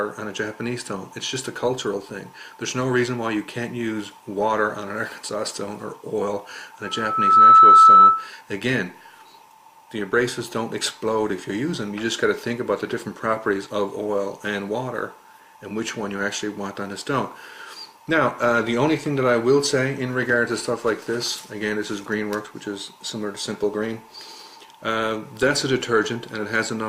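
From 6.84 to 8.30 s a single tone near 1.3 kHz swells over about half a second into a piercing squeal, roughly 15 dB above the programme. This is loudspeaker feedback squeal: the microphone picked up its own loudspeaker, and at that frequency the loop gain passed one.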